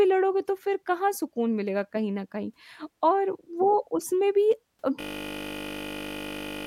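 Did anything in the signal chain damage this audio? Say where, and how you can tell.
Yes. A system hang loop at the driver or buffer stage runs from 5.01 s to the end. A single 20 ms slice of speech repeats over 80 times, heard as a steady 50 Hz buzz. The host stalled while the hardware kept replaying a 20 ms ring buffer.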